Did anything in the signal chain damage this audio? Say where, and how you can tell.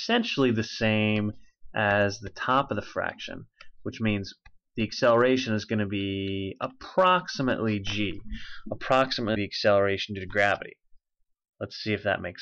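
Yes, at the storage or codec stage. From 9.34 to 9.37 s the audio jumps forward and the gap is filled by a brief glitch, about 26 ms long, which matches the length of a single MP3 frame. The likely cause is a broken MP3 bit reservoir. Once frames were lost, the next frame reached back for data it had stored earlier and decoded bytes from the wrong frame instead.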